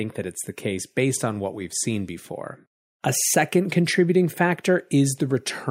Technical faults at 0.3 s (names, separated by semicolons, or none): none